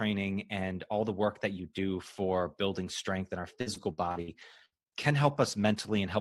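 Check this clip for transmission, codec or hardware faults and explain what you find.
One transmission fault is present. From 3.61 s to 6.03 s the speech shows repeated packet loss (robotic sound). Brief dropouts, the longest 61 ms, are filled by stretching the preceding sound, about 300 ms in total. The result is choppy speech with pieces missing.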